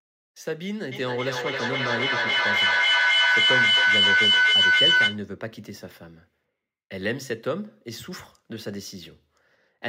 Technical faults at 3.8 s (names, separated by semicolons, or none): feedback howl